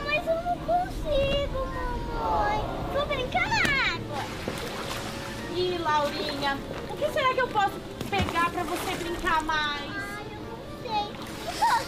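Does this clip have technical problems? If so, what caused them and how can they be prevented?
No, the signal shows no audible technical faults, so there is nothing here to trace to a cause or to prevent.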